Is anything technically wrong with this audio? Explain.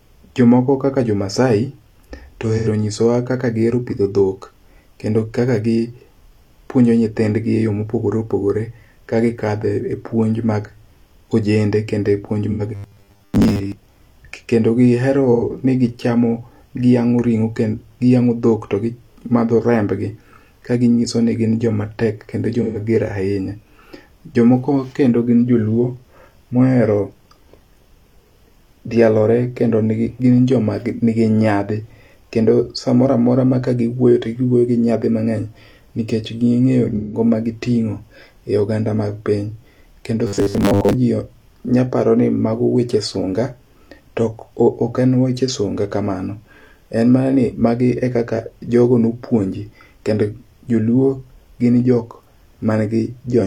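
Yes, the speech has two kinds of fault.

AAC frame loss with concealment occurs at 2.57–2.68 s, 12.51–12.62 s (just after "ojende kendo e puonj"), 15.33–15.43 s (just before "ni gichamo"), 22.62–22.78 s (after "ni gin jomatek kendo") and 36.96–37.20 s. Gaps of about 85 to 171 ms, consistent with two to four lost frames, are filled from the previous spectrum, leaving brief smeared, noisy patches.

Robotic sound from repeated short buffers appears at 12.75–13.75 s and 40.27–40.94 s. The likely cause is starved playback looping a 10 ms chunk, skipping most of the real audio. This imposes a rigid 100 Hz metallic buzz that only loosely follows the speech.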